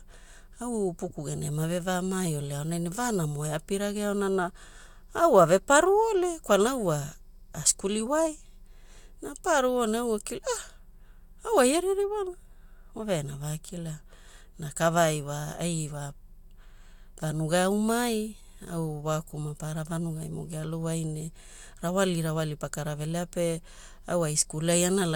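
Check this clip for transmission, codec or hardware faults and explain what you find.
Nothing audible points to any fault in this speech.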